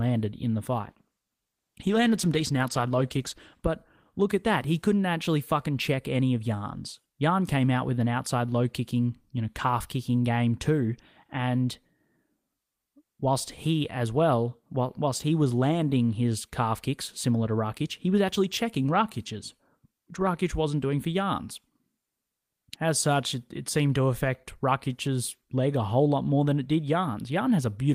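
Call bitrate drop from 0.78 to 3.71 s in this speech, between "in the" and "look at that": coarse, muffled coding that fits the encoder falling from 32 to about 14 kbps.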